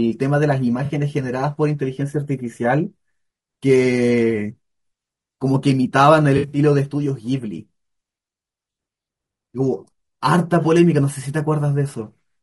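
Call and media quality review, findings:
Rough, grainy speech throughout. Noise between harmonics, dull synthetic top band. Likely low-delay AAC compression, AAC-ELD style. Short frames resolve pitch harmonics poorly. Damage plainly audible, which fits a bitrate near 32 kbps.

AAC frame loss with concealment at 0.85 s. Brief smeared, phasey patch, about 40 ms. Decoder repeats the last good spectrum across the gap. Consistent with two lost frames.

AAC frame loss with concealment, 6.37 to 6.59 s. About 120 ms of gaps scattered over 160 ms. Longest run roughly 70 ms. Noisy, smeared stretch. Concealment holds the spectrum.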